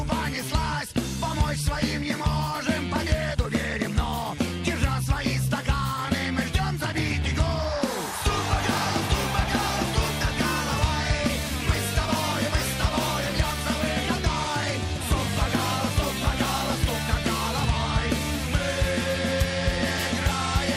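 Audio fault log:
No fault found.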